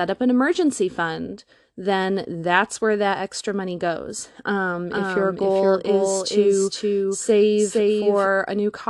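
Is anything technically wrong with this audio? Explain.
Yes. A doubled audio track runs from 4.91 s to 8.27 s. Here the speech is mixed in a second time, trailing the original by about half a second and sitting around 5 dB lower, likely because the signal was captured again through a slower path. The late copy is full-band and dry, with no decay or room colour, so it sounds like a distinct second layer talking over the first. It cuts in and out abruptly at both ends.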